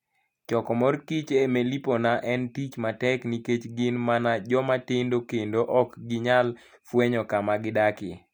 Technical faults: none

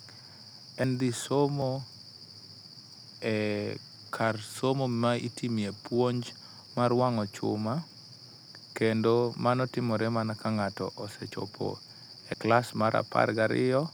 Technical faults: dropped buffer (overrun)

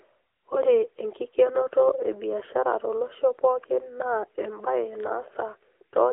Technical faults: AMR narrowband mobile codec

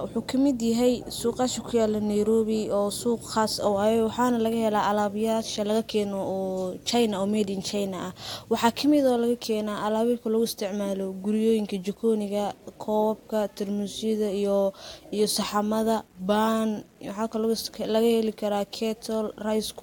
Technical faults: low bit depth without dither

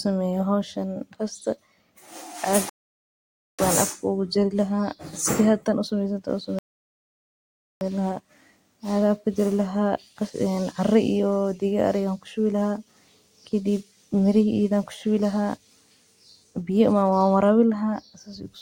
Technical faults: rebuffering stall

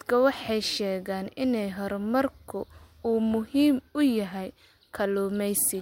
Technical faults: none

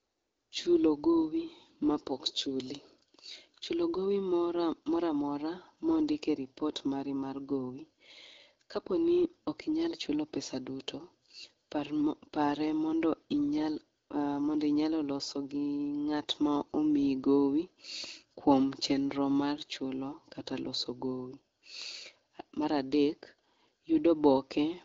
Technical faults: none

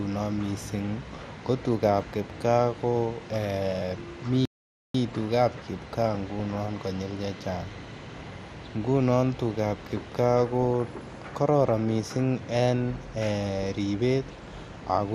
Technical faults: MP2 compression; DAB burbling; playback stall

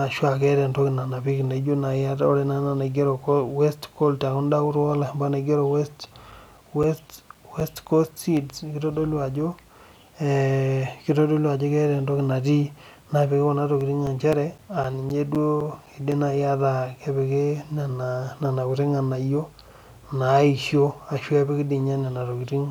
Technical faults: CD scratch ticks

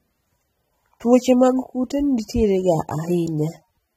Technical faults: AAC compression

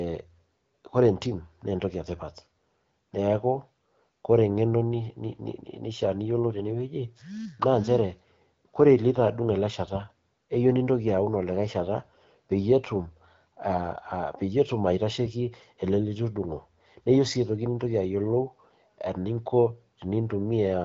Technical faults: none

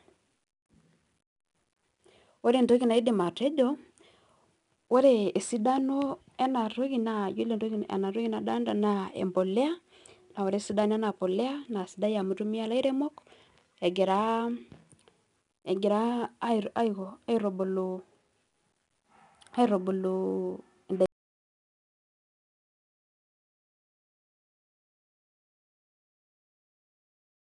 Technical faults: 4-bit ADPCM compression

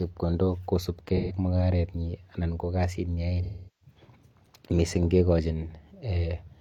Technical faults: AAC frame loss with concealment

